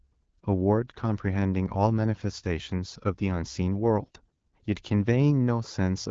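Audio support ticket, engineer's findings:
Hoarse, scratchy, gargly speech from 4.00 to 4.44 s. Pitch and level roughly hold. Probable component: AMR decoder over a weak link, AMR bit errors. Less-protected bits flipped, around one in ten. Pulse positions and fine pitch, gain and spectral values misdecoded. Clean wideband speech around the burst fits AMR-WB at 12.65 kbit/s.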